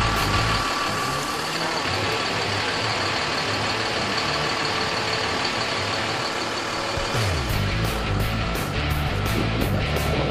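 At 2.9 s there is a short click or brief buzz with a hard join, where one tiny piece of the sound plays twice in a row. This is a repeated buffer. New audio arrived late, so the device replayed its last block, which fits a buffer of about 10 ms, and around 10 ms of the original audio is lost.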